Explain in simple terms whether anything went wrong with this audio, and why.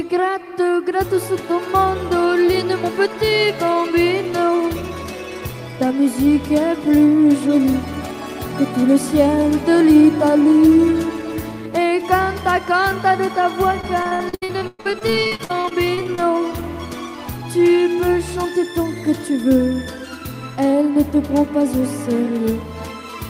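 From about 13.81 to 16.19 seconds the audio turns choppy, with bits missing. This is repeated packet loss (robotic sound). Over those two or so seconds, roughly two dozen small chunks of the stream were lost or arrived too late. Each hole, the longest about 114 ms, was patched by stretching out the sound just before it, so roughly a third of that stretch is filler rather than real audio.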